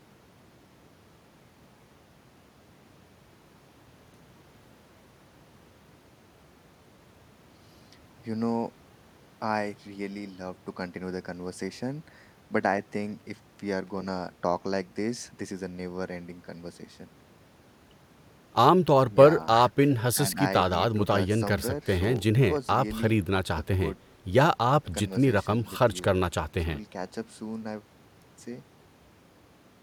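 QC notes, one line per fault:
13.87–13.98 s and 22.04–22.20 s, loose connector crackle: two short, ragged bursts of scratchy crackle cut into the speech, the first about 0.11 s long and the second about 0.16 s. A worn or dirty contact is making and breaking as something shifts, so the signal is chopped on and off very fast. Any DC sitting on the line turns each of those breaks into a pop, which gives the uneven, gritty texture.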